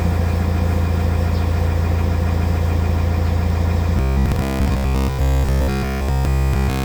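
From 3.97 s to the end of the clip, incoming audio likely stopped arriving in time, so the playback side kept refilling the gap by looping its last short buffer of about 15 ms while the real signal was skipped. Essentially everything in this stretch is that loop, and the repetition stamps a fixed 66.8 Hz pitch onto the sound. The result is robotic sound from repeated short buffers: a hard, metallic buzz that only loosely traces the original audio.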